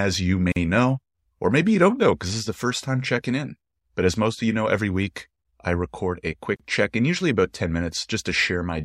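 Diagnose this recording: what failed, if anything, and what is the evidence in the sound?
Gaps at joins of encoded pieces occur at 0.52 to 0.56 s, a silence of about 42 ms just before "know or maybe you", and at 6.56 to 6.60 s, about 34 ms between "week I record a" and "check in usually about". The stage is the codec. The speech was encoded in pieces 6.0 s apart and spliced untrimmed. Each piece's encoder start-up delay and final-frame padding remain, so the speech stops, goes briefly silent with smeared edges, then resumes where it left off.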